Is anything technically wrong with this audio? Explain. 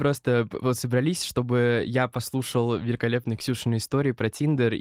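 No, the speech comes through Opus voice compression at 24 kbps in its hybrid, full-bandwidth mode, with no technical faults to be heard.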